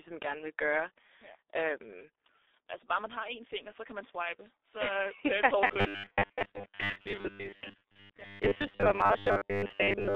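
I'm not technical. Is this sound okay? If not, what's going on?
No. Throughout, the speech has passed through the G.723.1 codec, an old internet-phone format that squeezes audio hard. Nothing above about 3.7 kHz survives, so the speech sounds muffled and hoarse, and consonants smear together.

From 5.67 s to the end at 10.15 s, the speech turns into a robotic sound from repeated short buffers. It becomes a rigid, metallic buzz at 100 Hz. The likely cause is a 10 ms chunk of audio being replayed over and over while most of the real sound is skipped.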